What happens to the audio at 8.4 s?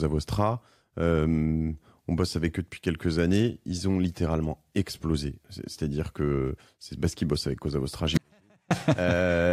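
At 8.4 s the audio is in a dropout to a faint residue, running from 8.17 to 8.71 s, about 0.53 s. The sound cuts off abruptly. Only a faint leak remains, roughly 40 dB down. The wanted signal was likely lost while the path stayed live.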